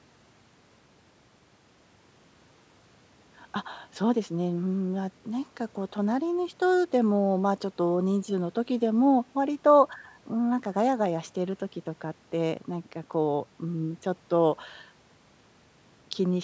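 No faults detected in the speech; the call microphone processing works as intended, with the lowest bass trimmed by its high-pass filter and nothing above 8 kHz.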